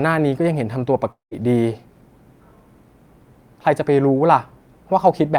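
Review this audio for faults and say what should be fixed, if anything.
From 1.11 to 1.34 s the speech breaks off: the last sound is stretched into a fading buzz, then about 130 ms of silence follows, and about 200 ms of audio never returns. This is a long network dropout, likely from a burst of lost packets. Prevention: add forward error correction, a larger jitter buffer, or a more stable network path.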